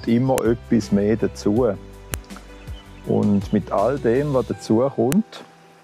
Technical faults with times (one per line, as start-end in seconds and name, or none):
0.38 file header played as audio
2.14 file header played as audio
5.12 file header played as audio